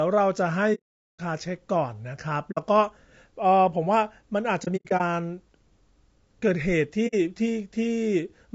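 Right from the start the speech has a rough, grainy texture, with noise filling in between the voice's harmonics and a thin, synthetic top end. That points to low-delay AAC compression, likely AAC-ELD at a low rate of around 32 kbps. Its short frames can't separate the pitch harmonics cleanly, and the bit budget runs out, so the damage is plainly audible the whole way through.

On top of that there's AAC frame loss with muting. The decoder zeroed the missing frames, so the sound fades out and back in. The longest hole runs from 0.74 to 1.20 s, about 450 ms of silence, which fits roughly fifteen lost frames. Short 60 ms gaps follow at 2.51 to 2.58 s and 7.07 to 7.15 s. Between 4.64 and 5.01 s the losses are scattered, totalling 180 ms, with the longest single dropout around a tenth of a second.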